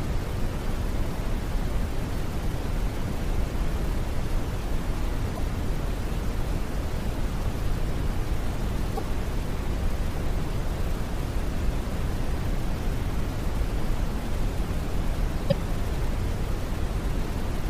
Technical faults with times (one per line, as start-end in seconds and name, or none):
5.34-5.39 damaged data in a compressed stream
8.95-8.99 damaged data in a compressed stream
15.48-15.52 damaged data in a compressed stream